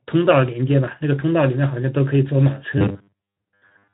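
A short speech clip, band-limited to nothing above about 3.9 kHz by its Speex coding, turns into a robotic sound from repeated short buffers at 2.78 s and stays that way to the end. Most of that stretch is a rigid metallic buzz at 100 Hz, likely from audio arriving too seldom so the last 10 ms chunk gets replayed to fill the gaps.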